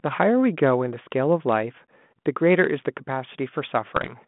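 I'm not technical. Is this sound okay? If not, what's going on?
No. There are two problems.

From the start to about 2.64 s there is channel delay (comb filtering). One of the two channels arrives a tiny fraction of a millisecond late. When the two are mixed into one, some frequencies cancel out, mostly high up, near 7 kHz. The speech sounds hollow and dull.

From about 3.96 s to 4.15 s there are bit errors on an ADPCM link, a phone-style connection. A small share of the data got scrambled in transit. Each error throws the decoder off briefly. You hear a short run of pops and rough crackle, with the level jumping.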